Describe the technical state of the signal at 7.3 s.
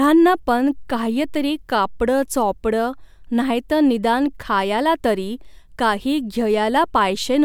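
At 7.3 s the signal is intact, with no audible fault at that moment.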